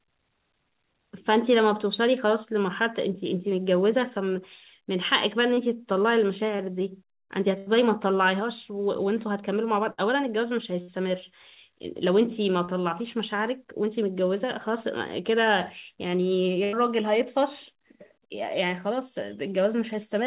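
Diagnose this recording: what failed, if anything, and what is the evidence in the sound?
Short concealed packet loss on the network at 5.54, 6.56 and 12.65 s. Each 30 ms hole was filled by continuing the last sound, leaving a brief smear.

Bursts of packet loss at 7.58, 9.92, 10.82 and 16.64 s. Each dropped 60 to 90 ms. The last sound was held and faded, then audio resumed further on.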